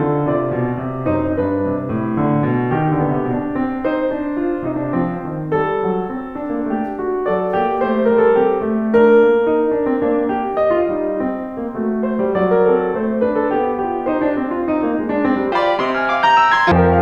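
From 15.52 to 16.72 s the music is audio read two samples at a time (double speed): pairs of samples are taken as single frames, so it plays twice as fast and an octave higher.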